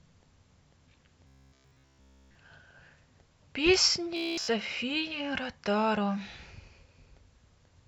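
Robotic sound from repeated short buffers hits this speech clip from 1.27 to 2.37 s and again from 4.17 to 4.48 s, turning it into a rigid metallic buzz near 66.7 Hz. This is likely a single 15 ms chunk replayed continuously while fresh audio is skipped.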